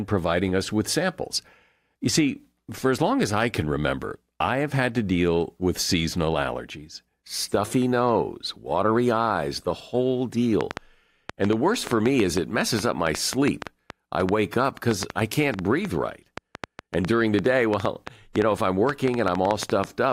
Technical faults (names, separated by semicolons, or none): train of clicks